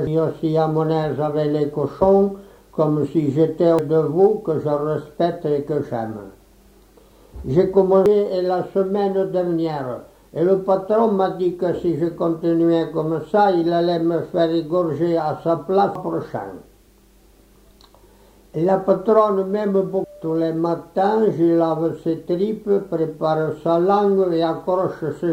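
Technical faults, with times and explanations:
0.07, 3.79, 8.06, 15.95 and 20.04 s: damaged data in a compressed stream. At each point the decoder misreads corrupted frames and loses sync, giving a brief chirp or blip. On a spectrogram each appears as a thin vertical broadband smear.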